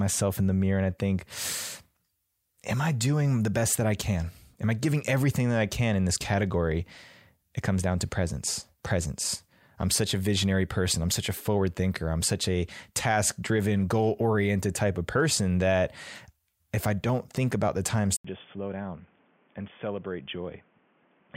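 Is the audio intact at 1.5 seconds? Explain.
Yes, the audio is intact at 1.5 seconds, with no dropout, distortion or other fault at that moment.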